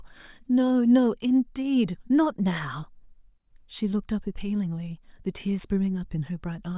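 No technical fault can be heard anywhere in the speech. There is nothing to place on the timeline.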